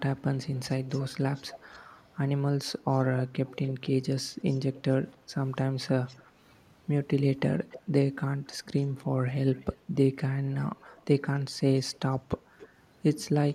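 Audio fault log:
0.17–2.06, 2.91–3.91, 4.47–4.79, 6.07–6.22, 7.70–7.79, 8.50–9.77, 10.52–11.04, 11.60–12.68 s: echo leak. The far end's echo canceller likely failed to remove loudspeaker pickup, so a faint copy of the speech returns 283 to 288 ms late, roughly 15 to 30 dB below it.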